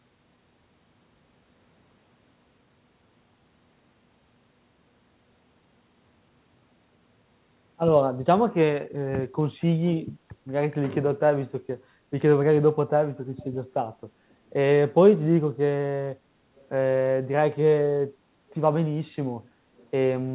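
Faint echo leak at 9.6, 13.38, 16.56 and 19.77 s: short scraps of the speech returning about 0.3 s late, likely a far-end speakerphone's echo canceller letting some through, heard over the band-limited call audio.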